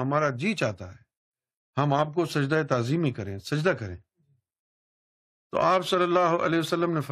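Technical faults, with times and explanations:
No technical faults are audible anywhere in this speech recording.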